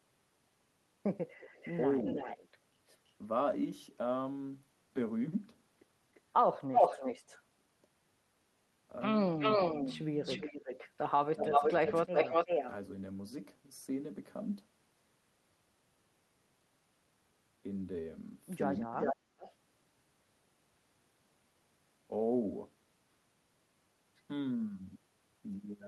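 From 1.39 to 2.58 s there's an echo leak: a delayed copy of the speech comes back about 330 ms late, roughly 15 dB under the direct sound. The likely cause is a far end on a loudspeaker whose echo canceller didn't scrub everything its mic heard. It recurs as a faint blip at 6.14 to 6.21 s (about 350 ms), then gets loud at 6.72 to 7.41 s, where it's roughly 5 dB above the speech, and sits at about equal level from 9.38 to 10.9 s with a 365 ms lag.

At 11.33 to 11.7 s the speech is suppressed in double talk. The speech dips hard, by up to about 25 dB over a couple of tenths of a second, likely because the canceller couldn't tell its talker from the returning echo and ducked both. That overlaps another echo leak from 11.43 to 12.71 s, about 5 dB hot at a 374 ms delay. The same pairing returns at 18.95 to 19.42 s with a deeper drop of about 35 dB lasting nearly half a second, alongside echo from 19.01 to 19.52 s that trails by 408 ms at around 5 dB below the speech.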